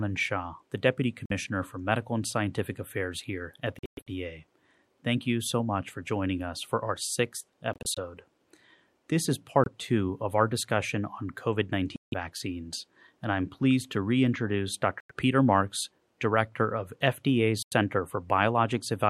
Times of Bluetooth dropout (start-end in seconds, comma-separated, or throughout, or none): 1.26-1.32, 3.79-4.08, 7.73-7.98, 9.64-9.68, 11.96-12.14, 15.00-15.11, 17.63-17.73